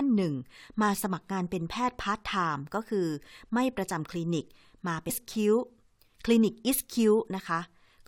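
A stream segment skipped at 5.09 s, most likely because one segment of the segmented speech stream failed to load and the player moved straight on to the next. The sound jumps abruptly forward at that point, with a brief blip marking the join.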